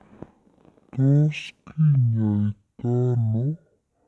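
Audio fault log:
throughout, wrong sample rate: the speech is being played back at roughly half the rate it was captured at, with no resampling in between. The sound points to 44.1 kHz material clocked out at about 22 kHz. Every sample lasts twice as long, so the speech runs at 0.5 times normal speed and its pitch drops by 12 semitones, a full octave. Voices come out deep, slurred and dragging, with formants shifted down along with the pitch.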